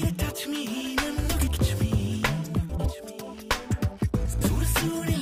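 Frames out of order: adjacent runs of frames, each about 80 ms, were decoded swapped, so the audio flutters at 1.39–1.57 s, 2.69–2.89 s and 4.26–4.46 s, without losing time.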